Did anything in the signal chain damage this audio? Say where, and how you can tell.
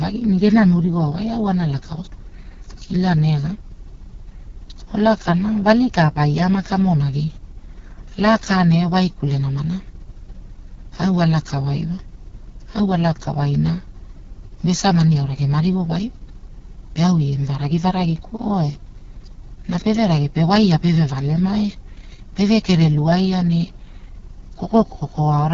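Yes. Throughout the speech the voice sounds rough and raspy, and nothing at all is audible above 7 kHz. This is the AMR wideband (HD Voice) codec at work: a model-based speech coder rebuilding the voice from pulses and a vocal tract filter, with heavy damage that points to its lowest 6.6 kbit/s mode. At that rate the fine spectral detail is discarded, and the top band is only shaped noise.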